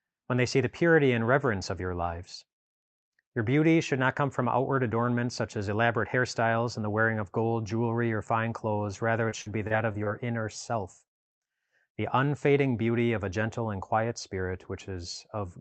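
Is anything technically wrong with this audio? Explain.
Yes. From 9.29 to 10.08 s the speech turns choppy and robotic, with repeated packet loss: several short holes, the longest 40 ms, are patched by stretching the preceding sound.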